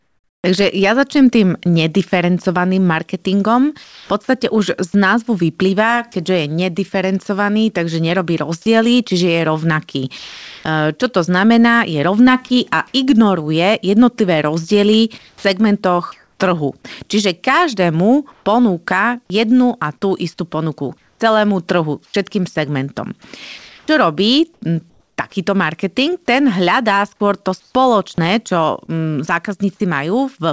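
From 0.0 to 4.1 s the speech is sound chopped by the voice detector. The sender's detector likely toggled transmission on and off, and about 0.7 s in total was replaced by comfort noise. Syllable edges drop out. On a spectrogram, speech harmonics break off into flat, smooth noise patches. The same pattern returns from 8.62 to 12.50 s, with about 0.54 s replaced, and from 20.98 to 25.18 s, with about 0.98 s replaced.

At 6.12–6.14 s and again at 15.18–15.44 s there is sound dropped by the voice detector. It likely judged quiet speech to be background and stopped sending. About 10 ms of speech vanished in the first case and about 110 ms in the second, and comfort noise fills the holes. In the waveform, the speech envelope falls abruptly to a low, even floor.

Comfort noise in place of the background runs from 15.18 to 18.46 s, with about 0.68 s substituted, and from 27.60 to 28.90 s, with about 0.16 s. 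During pauses the real room tone is likely swapped for featureless synthetic hiss. On a spectrogram this shows as uniform, detail-free bands, sometimes slightly darker.

At 28.86–28.90 s, short concealed packet loss appears as about 20 ms missing, filled by extrapolating the preceding sound. It is heard as a brief smear or wobble. On a spectrogram, the preceding sound stretches unnaturally for an instant before the real audio resumes. Throughout, nothing appears above 8 kHz, which fits the G.722 call codec at 64 kbps.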